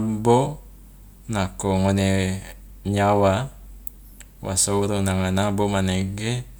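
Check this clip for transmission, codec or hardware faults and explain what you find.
No transmission, codec or hardware faults can be heard in this speech recording. Nothing in it calls for further explanation.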